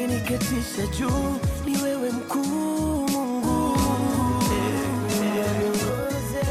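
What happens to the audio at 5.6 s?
At 5.6 s the audio is inside a doubled audio track that runs from 3.44 to 5.90 s. The likely cause is the same signal reaching the mix twice, once directly and once through a slower path or a misaligned edit. A second full-band copy trails the original by roughly 0.7 s at about the same loudness, with no decay or room colour. The sound becomes a dry, echo-like double that switches on and off abruptly.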